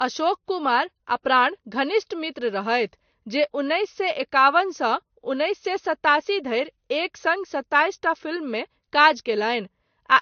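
Throughout the speech, the sound carries the layered damage of transcoding between lossy codecs, likely an MP3 encode at around 55 kbit/s re-encoded to Vorbis at roughly 37 kbit/s. Each stage discarded detail and added its own smearing, so swirly, watery artefacts sit on top of dulled, grainy consonants. Nothing survives above 6.5 kHz, and on a spectrogram the energy stops at a hard ceiling there, with patchy, blotchy gaps below it.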